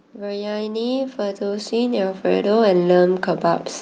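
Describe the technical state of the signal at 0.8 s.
At 0.8 s the signal is inside an automatic gain rising span running from 0.15 to 3.72 s. The gain control treated the input as too quiet and is steadily lifting it by about 13 dB, so speech and background noise swell together.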